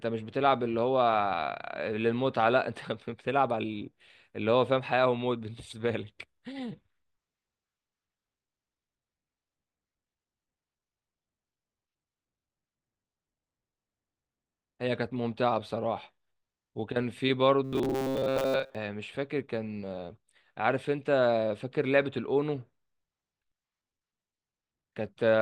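Speech, and from 17.65 to 18.75 s it collapses into a rigid, metallic buzz near 133 Hz that only loosely tracks the speech. This is robotic sound from repeated short buffers, likely a starved stream looping a roughly 7.5 ms chunk for most of that stretch while real audio is skipped.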